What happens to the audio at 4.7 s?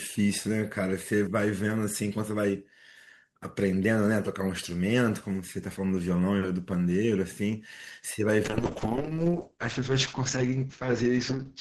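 Nothing goes wrong at 4.7 s; the audio there is intact, with no dropout, click, distortion or other fault.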